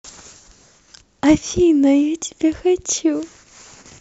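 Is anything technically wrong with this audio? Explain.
No, nothing technically wrong can be heard in this speech clip. It comes across as an ordinary recording with no audible faults.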